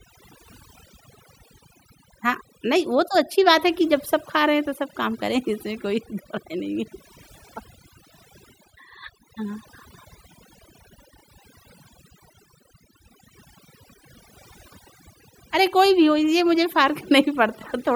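Throughout, the background drops to near silence dotted with twinkling specks while quiet parts of the speech go with it: overdone noise removal, gating bands near the noise floor.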